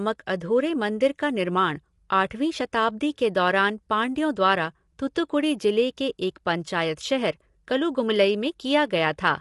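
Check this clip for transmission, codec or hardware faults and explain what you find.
The speech has one fault, present for the whole clip: low-delay AAC compression. From start to finish the sound is rough and grainy, with noise filling the gaps between harmonics and nothing above 11.5 kHz. The likely cause is AAC-ELD, the low-delay AAC used in video calls. Its very short frames cannot separate closely spaced pitch harmonics well, so bits run short and quantisation noise spreads between them. The plainly audible damage fits a bitrate around 32 kbps.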